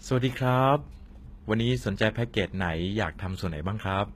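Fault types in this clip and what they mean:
HE-AAC compression: The speech carries a plainly audible coding texture, with s sounds and other bright consonants turning gritty and metallic, and the top end stopping at about 14.9 kHz. This is likely HE-AAC at a low rate, which fits roughly 20 kbps: only the lower spectrum is coded directly, and the treble is rebuilt by copying lower bands upward under a coarse envelope, so the synthetic highs are misaligned with the real harmonics.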